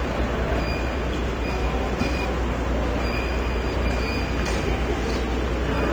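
The whole clip is band-limited. Nothing reaches above 9 kHz. The top end is dull and smeared. Sustained sounds have a warbling, fizzy texture. The damage is plainly audible. The likely cause is AAC compression, AAC-LC at a low rate, which fits about 32 kbps. At that rate the encoder lowers its cut-off. It also drops or fakes weaker spectral detail to save bits.

Sample clock jitter runs through the clip as well. The converter's clock wanders by a few microseconds. Each sample lands slightly early or late. The error tracks how steeply the waveform moves. It sits roughly 35 dB below the signal. It is heard as a hiss or grain. It thickens on loud, bright passages and disappears in the gaps.

From 1.50 to 2.25 s the chunks are out of order. A quarter-second block plays two blocks later than it should. No audio is missing, but the sequence is scrambled. There are three hard joins, and the moment sounds jumbled. 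From 3.00 to 4.00 s the same thing happens again. This time a quarter-second block turns up three blocks late. It gives a longer garbled stretch with three more hard joins.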